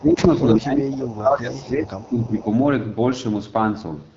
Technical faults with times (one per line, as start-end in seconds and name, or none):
0.00-4.16 AMR wideband (HD Voice) codec
0.00-0.30 speech suppressed in double talk
1.34-1.40 echo leak
2.01-2.46 echo leak